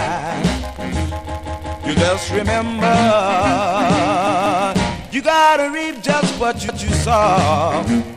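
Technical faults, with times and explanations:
1.30–1.86 s: repeated buffer. A 186 ms piece plays three extra times with hard joins. New audio arrived late, so the 8192-sample buffer was played again.
4.27–4.64 s: repeated buffer. The same 186 ms length sounds twice more, giving a shorter stutter. Playback then resumes without losing any sound.
6.69–6.87 s: repeated buffer. One extra 186 ms repeat gives a single hard-edged stutter. The device replayed its last block while waiting for data.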